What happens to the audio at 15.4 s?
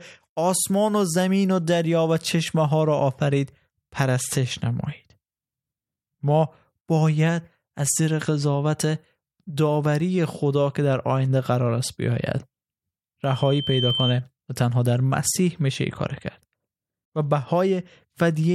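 Nothing goes wrong at 15.4 s: the speech carries on intact through that moment, with no dropout, click or distortion to be heard.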